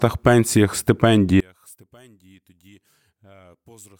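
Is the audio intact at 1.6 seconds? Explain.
No. One channel inverted from 1.40 s onward: likely reversed polarity on one side cancels the shared centre in mono, leaving the speech about 34 dB quieter.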